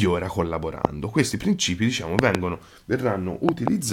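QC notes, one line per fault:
0.85–0.87 s, 2.19–2.37 s, 3.49–3.70 s: loud pop. One pop first, then a quick pair each time. Each stands roughly 20 to 25 dB above the speech. A sudden voltage pulse, likely from a plug, switch, static or driver glitch, was added. Speech continues underneath.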